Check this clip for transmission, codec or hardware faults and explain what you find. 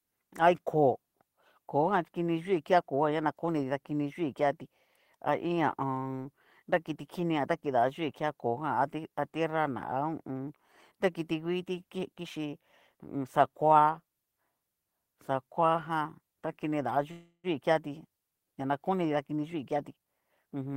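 Two transmission faults stand out in this speech clip, both tied to the receiver's jitter buffer.

From 17.11 to 17.47 s there is a call audio freeze: the last sound is stretched into a fading buzz that drops to silence for its final 80 ms. This likely comes from packets held up in transit, so the buffer ran dry and the receiver filled about 323 ms. Unlike a dropout, nothing is lost; the speech resumes exactly where it stopped, now about a third of a second later.

From 19.16 to 20.75 s comes a jitter buffer speed-up. The buffer's backlog is drained by repeatedly trimming pitch-period-sized pieces, roughly 0.3 s in total, so the speech runs at 115% and sounds hurried. Unlike a resampling error, the pitch stays where it was.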